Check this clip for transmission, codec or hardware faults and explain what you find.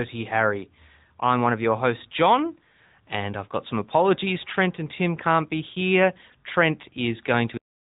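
Three faults turn up in the speech: mobile-codec coding throughout, a brief clip on a peak, and an abrupt cut-off at the end.

AMR narrowband mobile codec, throughout: the speech is squeezed through a low-bit vocal-tract model, so it sounds plainly buzzy and synthetic, fitting a rate near 10 kbps, with nothing above 3.8 kHz.

Hard clipping, at 7.31 s: a peak overdriven by about 2 dB gets its top sliced flat, adding upper harmonics heard as a short crackle.

Cut-off end, at 7.57 s: the final buffers never reached playback, so the sound stops mid-sound, dropping straight to digital silence without any natural decay.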